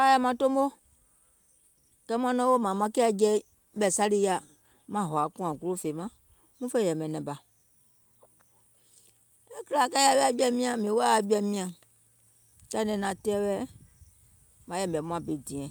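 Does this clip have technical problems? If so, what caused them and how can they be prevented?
Yes. From 2.73 to 6.35 s there is a call bitrate drop. The call's bandwidth estimate fell, forcing the encoder to spend far fewer bits, so the speech turns coarse, rough and muffled for about 3.5 s. The sound points to a drop from roughly 64 kbps to about 21 kbps, with full quality returning just before "muŋ fè yɛ̀mɛ̀ nɛ̀ŋ". A steadier, less congested network path, or a higher minimum bitrate floor in the call settings, would prevent this.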